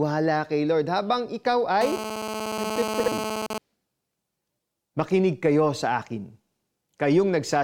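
Just after "habang ikaw", from 1.81 s to 3.58 s, a GSM phone buzz sits under the speech at about 6 dB below it. A nearby 2G handset sending data is radiating bursts at about 217 Hz, and a circuit in the audio path rectifies those radio pulses into audio. The result is a hard, raspy buzz rich in harmonics, unrelated to the speech. Because the phone is transferring data rather than holding a call, the buzz comes and goes in patches instead of holding steady.

Between 3.00 s and 3.08 s, inside the buzzing stretch, the speech has chunks out of order. One block of audio was delivered or written late and plays after the blocks that should have followed it. The 80 ms jumble fits a 20 ms chunk landing three positions late. Nothing is missing, but the sequence is wrong, and the three hard joins give a brief garbled stutter.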